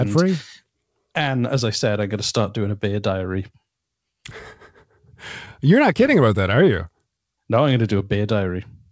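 The sender's clock runs roughly 3% slower than the receiver's, so the jitter buffer keeps draining throughout. This clock drift between sender and receiver leaves the speech slightly stretched and unsteady in pace, with small, unevenly spaced timing hiccups rather than one obvious break.

From 0.08 to 8.54 s, the receiver makes repeated timing corrections to keep up with the slow sender. It repeats short pieces, always lengthening and never cutting, which adds roughly 200 ms overall and plays the speech at about 97% speed. The result is a faintly dragging, uneven rhythm.

Between 4.30 and 7.02 s, about seven packets arrive late or go missing. These scattered short gaps are each patched by extending the preceding sound, with the longest about 10 ms and roughly 50 ms filled in total. They are heard as brief ticks or smears over the band-limited sound of the G.722 call path, which has nothing above 8 kHz.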